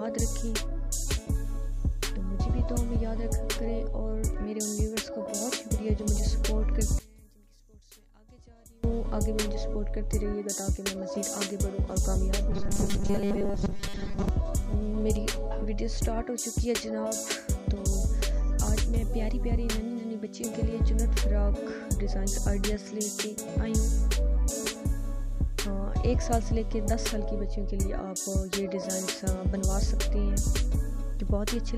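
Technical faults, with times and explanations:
6.99–8.84 s, one channel inverted: the sound suddenly drops by about 27 dB, leaving only a faint trace. One stereo channel has likely flipped polarity, so everything shared between left and right cancels when they're summed to mono.
12.51–14.29 s, robotic sound from repeated short buffers: the sound turns into a stiff, metallic buzz at 200 Hz that still loosely tracks the original shape. That pitch fits a 5 ms chunk being replayed over and over while the fresh audio is dropped, and most of this stretch is repeats.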